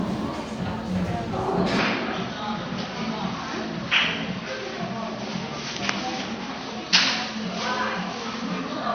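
An input switched to a poorer device, likely, at 1.79 s, and the change lasts to the end of the clip. From that point nothing above 6.2 kHz comes through, so the sound loses its top end and turns duller and boxier, the narrower band of a weaker microphone or a headset's call profile. The switch happens with no silence and no real jump in loudness, but a faint new background noise appears, sitting far below the sound itself.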